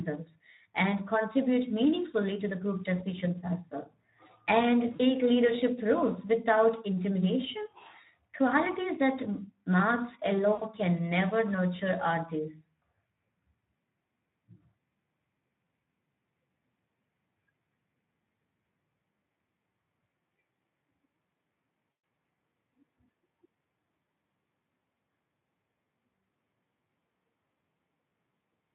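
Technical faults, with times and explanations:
Throughout: Speex codec. The CELP encoder is working at a low setting, consistent with roughly 11 kbps, so too few bits reach the excitation. The speech sounds noisy and hoarse, and the damage is plainly audible.
4.95–5.07 s, 10.54–10.66 s, 21.98–22.02 s: VoIP packet loss concealed by the speech codec. Packets dropped out, about 40 ms after "decisions as well and", about 80 ms before "can never nurture are", and about 120 ms at 21.98 s. Each time the decoder stretched its last pitch and filter into a fading buzzy tone or coloured noise, and the voice stays weak for a moment afterward.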